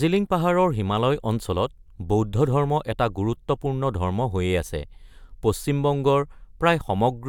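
Nothing in the speech stood out as a technical problem on listening.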